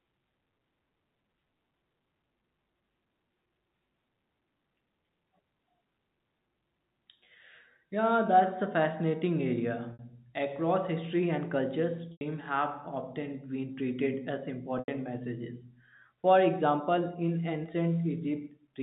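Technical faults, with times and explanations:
9.93 to 14.88 s, packet loss with pitch repetition: gaps at 9.93 s (60 ms), 12.12 s and 14.79 s (90 ms) are filled by a repeated pitch period that fades, giving a brief buzzy hold.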